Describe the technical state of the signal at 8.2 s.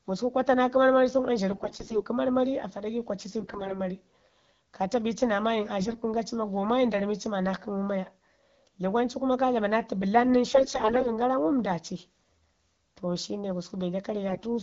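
At 8.2 s the speech runs intact with no fault, carried through the AMR wideband (HD Voice) codec, whose band-limited, clear character fits a rate of around 12.65 kbit/s.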